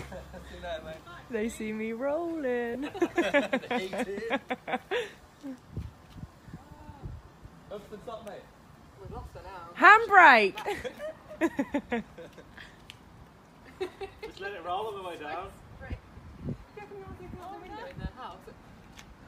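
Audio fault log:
2.74 s and 6.77 to 6.80 s: lost LE Audio frames. The LC3 decoder refills each gap with the last spectrum with randomised signs, so both moments come out as a short noisy smear. The first gap fits one 7.5 ms frame, the second about three, around 22.5 ms.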